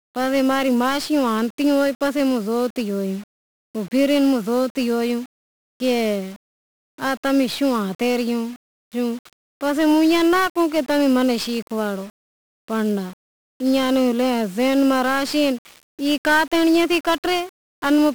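1-bit DFPWM compression runs through the whole speech clip, from the first second to the last. Each sample is reduced to a single up-or-down bit that nudges an adaptive level toward the original waveform. That coarse steering leaves heavy broadband quantisation noise, so the speech sounds fuzzy and crackly and the upper frequencies drown in hiss. The damage is heavy, which fits a low-rate stream of about 48 kbps.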